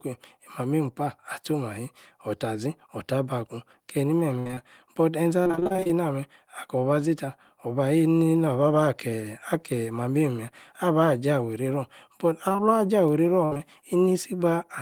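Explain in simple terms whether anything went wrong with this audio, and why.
The speech suffers repeated packet loss (robotic sound) from 4.39 to 5.91 s and again from 12.49 to 13.61 s. Short chunks, up to about 60 ms each, went missing in quick succession and were patched by stretching the preceding sound, giving a choppy quality.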